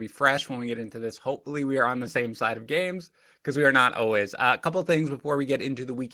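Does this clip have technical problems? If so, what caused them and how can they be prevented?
No, no technical faults are audible.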